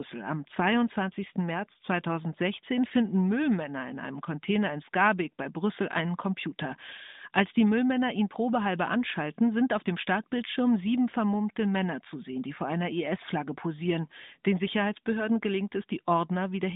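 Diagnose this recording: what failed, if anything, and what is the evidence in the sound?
Nothing in the recording has failed at any stage. The speech carries through the AMR narrowband mobile codec, with the band limited to roughly 200 Hz to 3.7 kHz, nothing above about 3.8 kHz, and only the light coding texture that fits that codec's top 12.2 kbps mode.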